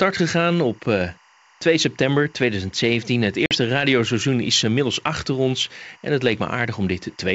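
Timecode bleed runs under the whole speech clip, a steady chirping warble well below the voice, about 35 dB down. Linear timecode at 23.976 frames per second is leaking from a nearby track or cable, its square wave flipping between tones near 1 and 2 kHz. On a spectrogram it shows as faint, continuous horizontal bands at those two frequencies, with rapid alternation visible when zoomed in.

Packet loss on an ADPCM call cuts a hard-edged hole from 3.46 to 3.54 s, just before "radioseizoen is inmiddels achter". About 50 ms of audio is missing, which fits a handful of lost packets filled with silence. The decoder's predictor and step size then disagree with the sender's, so the speech comes back slightly distorted before settling. The waveform shows a flat gap with abrupt edges, followed by briefly distorted cycles.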